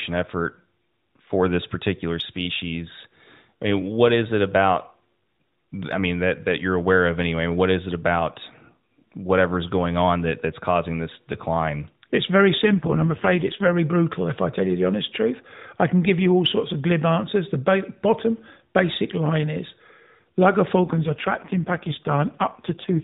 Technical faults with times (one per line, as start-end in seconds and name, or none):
12.62-13.78 AMR rate drop
20.80-23.04 AMR rate drop